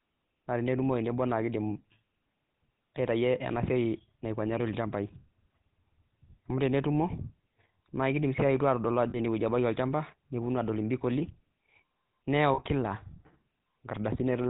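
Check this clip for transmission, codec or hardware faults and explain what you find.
Two codec faults are present in this speech. The GSM full-rate codec colours the whole clip, and lost GSM frames cause two brief dropouts.

GSM full-rate codec, throughout. The codec models the vocal tract with sparse pulse excitation, which fits about 13 kbps. The speech sounds buzzy and gravelly, and nothing passes above 4 kHz.

Lost GSM frames, at 9.1 to 9.19 s, just before "ene wueji", and at 12.54 to 12.6 s. Each gap fits two lost frames, about 40 ms. The last good frame repeats, leaving a short, rough, metallic ring.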